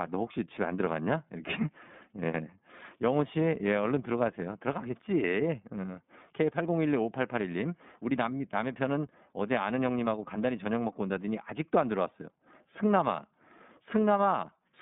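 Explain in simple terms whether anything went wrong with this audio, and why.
Yes, something's off. The whole clip of speech has been squeezed through the iLBC codec, a phone-style voice codec. It chops the sound into 30 ms slices and rebuilds each one mostly on its own, which gives the voice that slightly rough, synthetic edge you can plainly hear from start to finish. It also keeps only a narrow phone-line band, roughly 150 Hz to 3.6 kHz, with nothing above about 3.7 kHz, so everything sounds thin and muffled.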